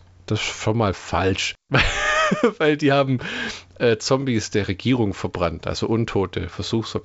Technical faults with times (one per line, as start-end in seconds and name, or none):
none